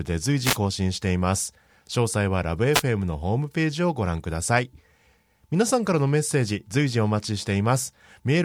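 Short bursts of static swish across the speech from 0.42 to 0.58 s and again from 2.72 to 2.83 s. These are wireless microphone noise hits, where the FM radio link fades and receiver noise briefly covers the voice.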